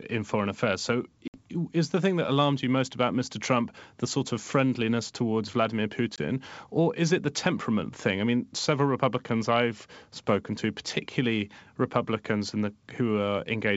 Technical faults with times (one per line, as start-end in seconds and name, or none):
1.28-1.38 packet loss on an ADPCM call
6.16-6.19 packet loss on an ADPCM call